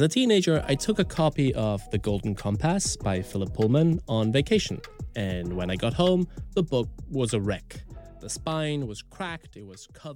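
At 3.30 to 3.34 s the audio has chunks out of order: one 10 ms piece of sound was delivered late and plays three chunks after its proper place, so the three pieces that should follow it come first. No sound is missing, which separates this from a dropout, and nothing is heard twice, unlike a repeat or stutter. Instead there is a brief scrambled flicker at the hard joins where mismatched pieces meet.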